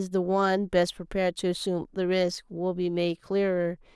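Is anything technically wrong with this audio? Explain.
No, nothing technically wrong turns up here; this short bit of speech sounds fine all the way through.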